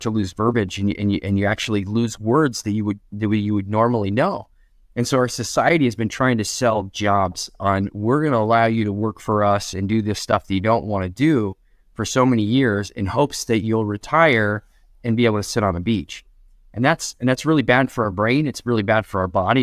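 No technical faults are audible.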